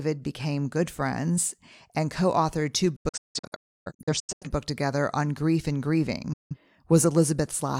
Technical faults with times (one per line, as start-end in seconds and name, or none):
2.96-4.47 digital broadcast dropout
6.33-6.56 digital broadcast dropout